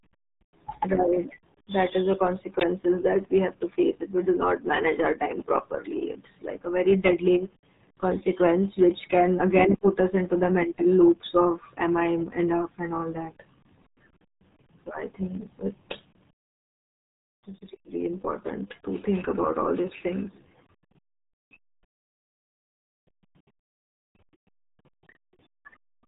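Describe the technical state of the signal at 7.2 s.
At 7.2 s the speech carries the RealAudio 14.4 codec damage present across the whole clip. The heavy coding, consistent with an 8 kbit/s dial-up speech codec, removes everything above 3.8 kHz, leaving the speech muffled and gargly.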